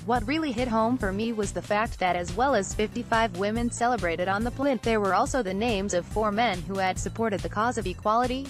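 At 6.87 s a block of digital silence lasting only 0.5 ms cuts in, likely because the output buffer wasn't filled in time. It's heard as a single tick; the waveform shows a flat notch, and the spectrogram a thin full-band vertical line.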